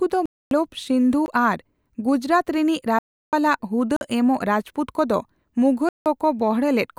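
Abrupt holes cut into the speech at 0.26–0.51 s, 1.26 s, 2.99–3.33 s, 3.96–4.01 s and 5.89–6.06 s, each cutting in and out with no fade. These are blocks of digital silence: zeros replaced the audio, most likely because the output buffer went unfilled. The brief 1.26 s dropout is a short hole, and the longer ones, up to 0.34 s, are clear gaps.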